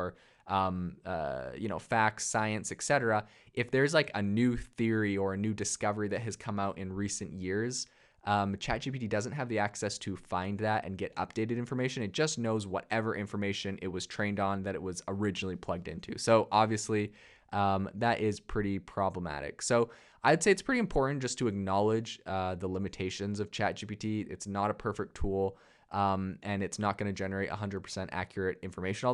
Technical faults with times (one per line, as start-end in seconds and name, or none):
none